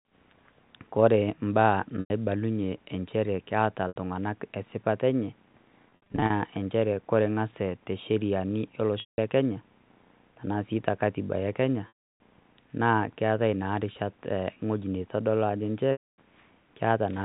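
Packet loss with pitch repetition hits at 2.0, 3.88, 5.9, 9.0, 11.88 and 15.92 s. The receiver loops the last pitch period over each gap. The 100 ms and 80 ms losses sound like a brief buzzy hold. The 180 to 320 ms losses fade to silence before the speech cross-fades back. At 5.9 s, short dropouts scatter across 400 ms. The G.711 telephone band shows no audible trouble.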